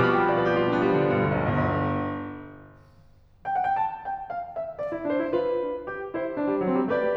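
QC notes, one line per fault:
No faults to flag on this music clip, so there's nothing here that needs a note.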